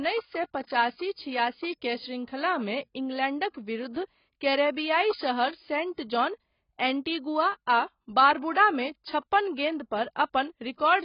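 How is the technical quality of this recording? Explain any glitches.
Poor, from start to finish. The speech sounds dull and smeared, with nothing above 5.2 kHz and a fizzy warble on sibilants. It is likely heavy AAC compression, consistent with a bitrate around 16 kbps, which forces coarse quantisation and a lowered cut-off.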